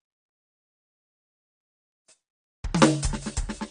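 The music carries plainly audible AAC compression damage throughout, likely from low-bitrate AAC-LC encoding near 32 kbps. Sustained tones warble and smear, and nothing sounds above 9.9 kHz, so a spectrogram shows a hard ceiling there.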